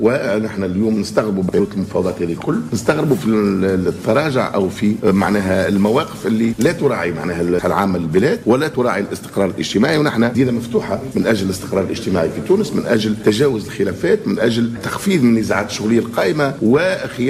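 The decoder dropped compressed frames at 1.56 to 1.60 s, either because they were missing from the stream or because it rejected them as corrupt. This is compressed frames skipped. Around 50 ms of audio is never played, so the sound jumps forward by that much. The material just before and after butts together at the join.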